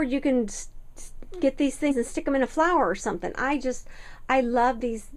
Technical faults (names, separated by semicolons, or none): compressed frames skipped